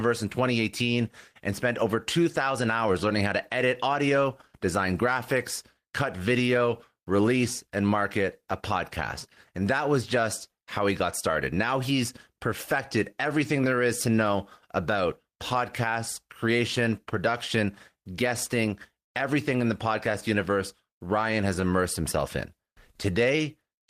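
Clock drift between sender and receiver runs throughout this speech. The sender's clock runs roughly one and a half percent slow, so the receiver's buffer keeps draining.

Repeated timing corrections run from 0.02 s to 23.82 s. The receiver repeats short fragments to fill the gap, slowing delivery to 99% speed and adding roughly 0.3 s overall. These are heard as faint, unevenly spaced hiccups.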